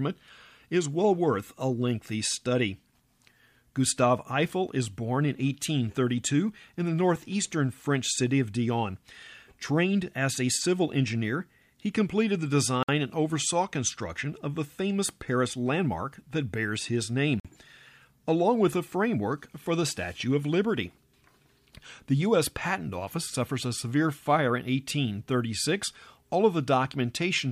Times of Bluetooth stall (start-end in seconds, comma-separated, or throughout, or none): 12.83-12.89, 17.40-17.45